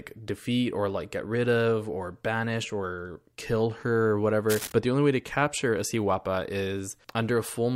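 From 4.49 s to 4.72 s, a burst of cable scratch noise sits over the speech for roughly a quarter of a second: dense, irregular crackle and rustle at a level around 10 dB below the speech. The likely cause is a worn cable, connector or control being handled, with its contact resistance fluctuating rapidly and injecting uneven noise bursts into the signal path.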